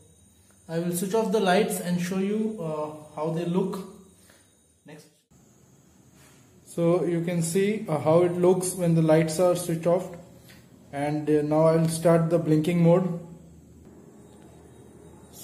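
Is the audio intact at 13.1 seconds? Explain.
Yes, the audio at 13.1 seconds is intact, with no dropout, click, distortion or other fault at that moment.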